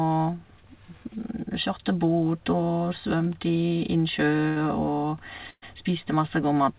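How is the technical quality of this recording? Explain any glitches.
The recording has two brief dropouts. The call path carries nothing above 4 kHz, which points to a narrowband telephone codec such as G.711 mu-law.

Burst of packet loss, at 4.48 to 4.58 s and again at 5.50 to 5.64 s: consecutive packets failed to arrive in time, so the receiver extended and faded the last sound for about 80 ms, then 120 ms. The second gap ends in a short silence. The audio then resumes with those stretches missing.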